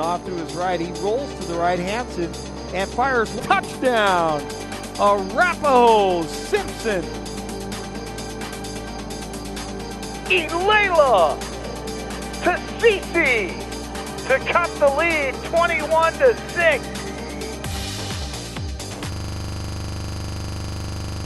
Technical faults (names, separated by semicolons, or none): skip ahead; jitter buffer speed-up; system hang loop